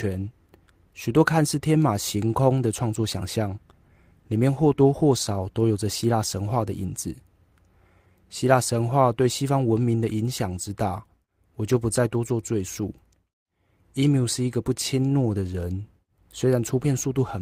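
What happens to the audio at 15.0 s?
At 15.0 s the audio runs on intact, with no dropout, click, distortion or other fault at that moment.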